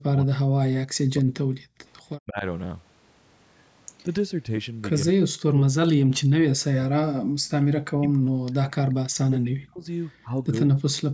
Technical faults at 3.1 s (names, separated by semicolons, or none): none